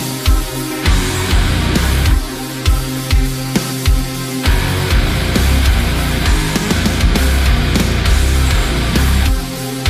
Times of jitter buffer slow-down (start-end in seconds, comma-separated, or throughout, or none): none